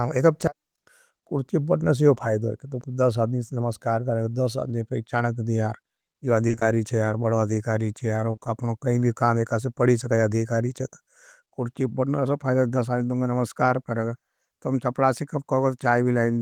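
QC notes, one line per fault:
6.47–6.63 s, repeated packet loss (robotic sound): four dropouts of up to 20 ms, each patched by extending the preceding audio, leaving half the stretch synthetic and choppy.
8.31–8.47 s, repeated packet loss (robotic sound): same pattern, four concealed holes of up to 20 ms covering half the span, so the speech turns choppy with pieces missing.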